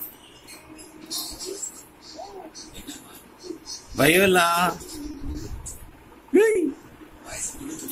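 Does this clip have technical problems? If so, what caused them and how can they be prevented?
Yes. There are three short stalls from a late packet, at 5.11 to 5.27 s, 5.32 to 5.38 s and 6.51 to 6.58 s. Each time the jitter buffer ran dry, so the receiver held the last sound for 20, 30 and then 40 ms until the late packet arrived. It then resumed from the same point, so nothing is lost, but each sound drags with a slight buzz or dip. A larger or adaptive jitter buffer would absorb these delays.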